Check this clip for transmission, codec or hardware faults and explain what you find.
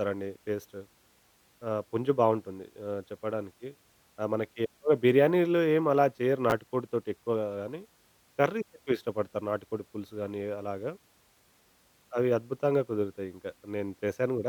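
One transmission fault occurs in this speech clip. At 6.50 to 6.52 s there are chunks out of order: a 10 ms chunk was delivered one chunk late and played after its successor. Nothing is lost, but the swap creates three hard joins, heard as a brief jumbled blip.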